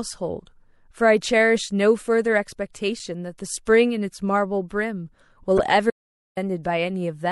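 Throughout the clip the speech carries the marks of MP3 compression. The top end is cut off, and the sound has a watery, swirling quality. S sounds turn metallic and chirpy, and consonant onsets smear. The damage is plainly audible, which fits a low bitrate of around 64 kbps. The likely cause is an encoder short of bits. It drops the treble at a fixed point and lets weak frequency lines flicker on and off from frame to frame.

At 2.99 s there is a brief blip, a sign of damaged data in a compressed stream. A short stretch of the encoded file is wrong. The decoder misreads that frame, loses sync, and jumps to the next frame header. This produces a short glitch in the sound. A second burst of the same damaged data runs from 5.57 to 5.60 s. It is more than twice as long and again heard as a short glitch.

From 5.90 to 6.37 s comes an audio dropout to silence. The speech cuts off mid-flow and returns after about 0.46 s. 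The gap is silent. No room tone or background remains. Whatever was said during it is lost. This points to the input likely vanishing briefly, perhaps through a failed link or stray mute, while the recorder kept writing silence.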